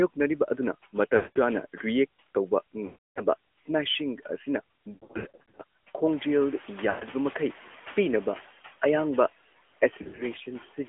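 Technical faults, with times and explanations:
Throughout, noise suppressor artifacts: steady background is pulled down by about 13 dB in the gaps and returns beneath the talker. This is most apparent after the room noise climbs by about 12 dB near 6 s.
Throughout, AMR narrowband mobile codec: audio is confined to roughly 250 Hz to 3.4 kHz, with plainly audible buzzy, synthetic coloration from a low-rate vocal-tract model, which fits the 10.2 kbps AMR-NB mode. Background noise takes on a swirling quality.
1.16–1.61, 2.86–3.23, 4.94–5.62, 6.90–7.04, 10.02–10.24 s, lost AMR speech frames: the decoder repeats the last good pitch and vocal-tract settings at falling gain, smearing the sound into fades and dips. About 200 ms is lost before "ꯔꯤꯑꯦꯛꯠ ꯇꯧꯕ" and 300 ms after it. Loss is scattered across 640 ms at the third event, 120 ms at the fourth and 120 ms within 160 ms at the last.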